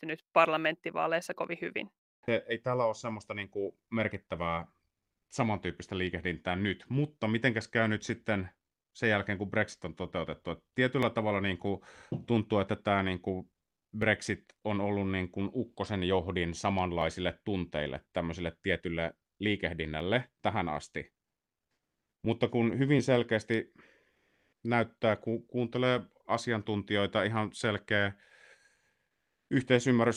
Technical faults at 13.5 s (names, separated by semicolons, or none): clock drift buffer slips